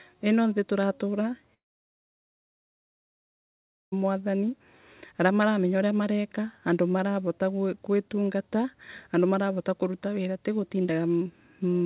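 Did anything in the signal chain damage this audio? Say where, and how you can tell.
Yes, a long network dropout at the network stage, 1.54 to 3.94 s. The sound smears into a brief fading buzz, then about 2.3 s of silence, and resumes with that stretch missing, likely from lost packets. The spectrogram shows a decaying smear, then a blank gap.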